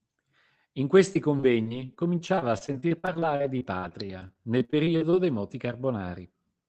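From 1.13 to 5.15 s, just before "dei moti", repeated packet loss left dozens of short holes, none over 54 ms, each patched by extending the preceding sound. About a fifth of that stretch is filled this way, so the speech sounds choppy and robotic.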